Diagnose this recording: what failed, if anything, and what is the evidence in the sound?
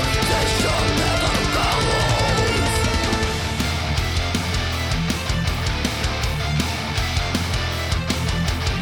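Nothing failed: no stage in the chain, from wiring and conversion through buffering, processing, network, storage and playback, leaves an audible trace anywhere in the recording.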